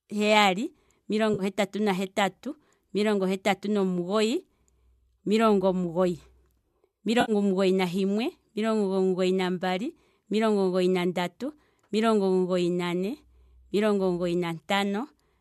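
Speech with three brief dropouts from AAC frame loss with concealment. At 1.34–1.43 s, 4.39 s and 7.21–7.32 s the audio turns smeared and noisy. The decoder rebuilds the gaps from the last good spectrum. The lengths suggest about 50, 10 and 70 ms of lost audio, consistent with short low-delay frames, likely AAC-ELD.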